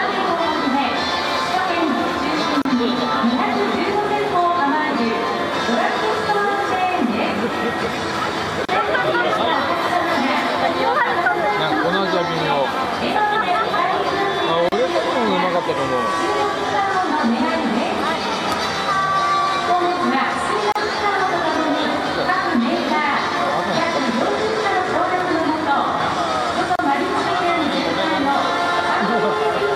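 At 2.62, 8.65, 14.69, 20.72 and 26.76 s, a 34 ms gap at a join of encoded pieces breaks the continuous sound. Each separately encoded section kept its padded silence. Strict 6-second spacing and sound resuming exactly where it stopped rule out random dropouts.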